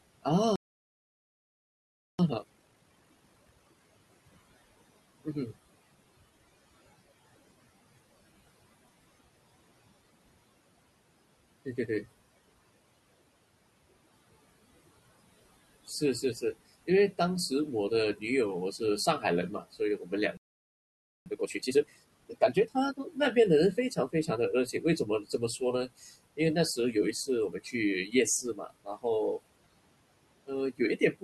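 Throughout the clip a noise suppressor is working on the signal, judging which frequency bands hold steady noise and pulling them down frame by frame, by about 20 dB at most. The room noise, which sits about 19 dB below the speech, therefore dips in the gaps and swells back underneath each phrase.

At 0.56 s the output was starved, likely because the player ran dry of data or its thread was held up, and the sound cuts out mid-flow for about 1.6 s until 2.19 s. From 2.19 to 3.81 s the player then works off its backlog with a time-compressed catch-up, dropping and cross-fading short slices so the audio runs at twice its normal rate. The speech sounds rushed yet keeps its pitch.

Between 15.87 and 17.51 s the suppressor mistakes some speech for noise and turns it down by up to about 10 dB, though only briefly, around a tenth of a second in total, so a sound or two comes out swallowed. The same speech cut by the noise suppressor returns from 18.78 to 23.17 s, deeper at up to about 18 dB and covering well over half a second, leaving parts of the speech faint.

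Inside that stretch a second playback stall silences the output from 20.37 to 21.26 s, close to 0.9 s. A catch-up at 1.5 times normal speed follows until 23.02 s, hurried at unchanged pitch.

The suppressor keeps biting into the speech from 23.76 to 29.40 s, with drops of up to about 19 dB adding up to roughly a second of muffled or vanished detail. From 30.46 s to the end it cuts again, by up to about 20 dB over a fraction of a second, so the last sounds fade into the background.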